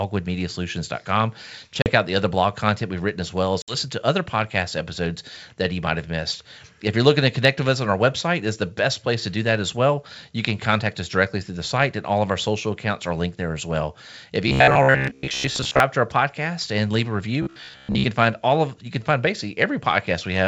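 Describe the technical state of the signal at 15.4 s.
At 15.4 s the speech has a rigid metallic buzz near 66.7 Hz from 14.48 to 15.80 s: robotic sound, likely from repeated short buffers looping about 15 ms segments over most of the audio.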